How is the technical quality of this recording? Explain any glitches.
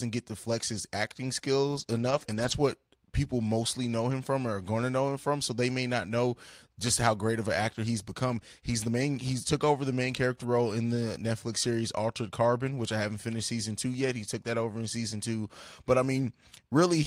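The recording is intelligible, but it has a cluster of network packet-loss damage near the start and a few brief repaired spots later.

Lost packets rebuilt from error correction occur at 1.71–1.81 s, 1.87–2.53 s, 4.11–4.13 s (after "what people mostly know", before "from or are going"), 7.71–7.77 s (after "how great of an", before "he's become") and 10.43–10.45 s (after "over the main character", before "role in the"). Each lost packet's content arrived as a low-bitrate backup inside the following packet, and the decoder played that copy. The sound never drops out, but it turns rough and grainy. The long stretch from 1.87 to 2.53 s, with about 340 ms rebuilt, is the longest. On a spectrogram these spans show coarser, blurrier harmonics and a noisier floor. The waveform stays continuous, with no gap.

Short concealed packet loss falls between those first two spans, at 1.83–1.87 s. About 20 ms of audio never arrived, and no backup copy was available. 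The decoder extended the preceding sound for roughly 12 ms and then crossfaded back into the real signal, which gives a brief smear or wobble. A spectrogram would show a short, smoothed, repeated-looking patch with slightly smeared edges.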